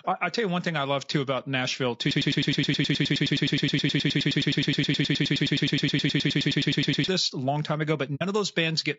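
The speech sounds rough and grainy throughout, with noise between harmonics and a dull top band. This is likely low-delay AAC compression, fitting AAC-ELD near 32 kbps.

From 2.11 to 7.08 s, a 105 ms fragment repeats 47 times, back to back. This broken-record loop likely comes from a stalled stream. It ends before "this a long time".

After "a long time ago", at 8.15 to 8.22 s, a soft 60 ms gap fades out and in. This is AAC frame loss with muting, fitting two lost frames.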